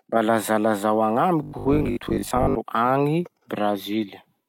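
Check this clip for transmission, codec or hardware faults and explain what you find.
One fault is present. From 1.43 to 2.57 s, the speech turns into robotic sound from repeated short buffers. A rigid 50 Hz buzz is imposed on the speech. This likely comes from audio arriving too slowly, with about half replaced by repeats of a 20 ms buffer.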